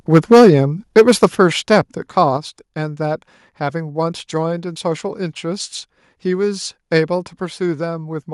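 Microphone overload from 0.13 to 0.55 s and again from 0.97 to 1.26 s gives this speech clip a harsh, crackling edge. Peaks are driven about 6 dB past full scale, so their tops are sheared flat, affecting roughly a tenth of the samples in the first stretch and a little less in the second. The likely cause is an input volume set too high for the converter. Microphone volume stepped down at 0.34 s (about 2 dB), 1.35 s (about 6 dB), 2.37 s (about 5 dB) and 7.47 s (about 2 dB). Each time, the voice and the background drop together in one abrupt step rather than fading. The first two steps come during or just after the distorted passages, which fits call software likely reacting to the overload by cutting the device's input gain.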